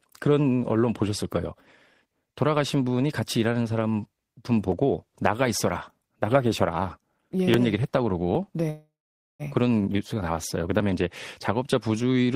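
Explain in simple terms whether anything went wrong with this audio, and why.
Dropped buffer (overrun), at 7.54 s and again at 8.35 s: each time the speech jumps forward slightly, with no pause. The likely cause is that the recording program didn't pick up a small chunk of sound, roughly a hundredth of a second, before the hardware wrote over it. That chunk is lost, and the sound on either side is joined directly.

Call audio freeze, from 8.70 s to 9.42 s: the speech stops and the last sound hangs on as a fading buzz or hiss, then about half a second of silence follows. This is likely because sound packets were held up on their way across the network, so the receiver ran out of audio to play and stretched what it had. When the packets arrived, the speech carried on from where it stopped. About 0.69 s of extra time was inserted, and nothing was lost.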